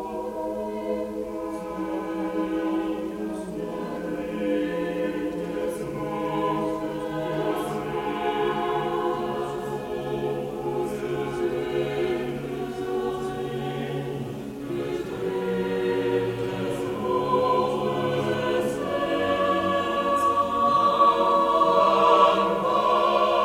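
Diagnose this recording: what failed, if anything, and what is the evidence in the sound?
Video or display buzz runs throughout, a 60 Hz field-rate buzz with hash above it, sitting roughly 25 dB below the sound. It enters in the analogue wiring: a screen or video cable couples its picture-refresh energy into the audio path.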